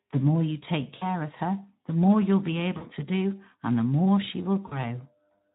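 Speech coded with the Speex codec at a low setting, which fits a rate near 11 kbps, sounds hoarse and noisy. On a spectrogram, the harmonics look smeared and grainy, and any energy above 8 kHz appears as diffuse, texture-less fill. VoIP packet loss concealed by the speech codec occurs at 0.97–1.11 s (between "more you take" and "of her the more"), at 2.77–2.86 s (before "to do and the") and at 4.67–4.79 s (after "and the more she"). Each event fits roughly 40 ms of missing audio. The decoder extrapolated from its last pitch and filter into a fading buzzy tone or coloured noise, and the voice stays weak or distorted afterward, visible as a shrinking waveform envelope.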